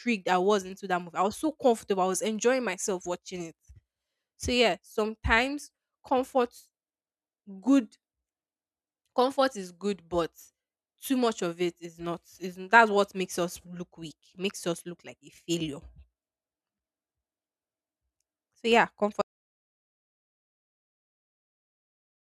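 At 19.22 s the speech just stops dead and the clip stays in total silence right through to the end, a bit over 3 s of nothing. That's an audio dropout to silence: no fade and no room tone underneath, just silence. The most likely story is that the input went away, a loose connection or an accidental mute, while the recorder kept writing, so whatever came after that point is simply lost.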